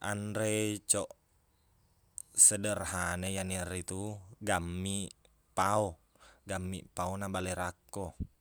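No technical faults are audible anywhere in the recording.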